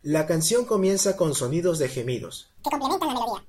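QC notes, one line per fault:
2.58–3.48 s: audio read two samples at a time (double speed). The reader treats each pair of samples as one frame, so the speech races at 2x and jumps 12 semitones, an octave up. On a spectrogram, harmonics spread to twice their spacing; the waveform looks compressed in time.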